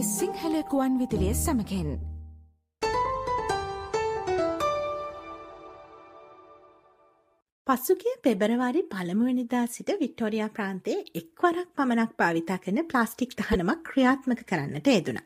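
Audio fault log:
2.02 s and 13.52–13.56 s, corrupt frame decoded: damaged bits in compressed frames were decoded anyway, so misread gains and codes put energy at the wrong frequencies. The first is a faint blip near -35 dBFS. The second is a much louder burst near -10 dBFS, lasting about one frame.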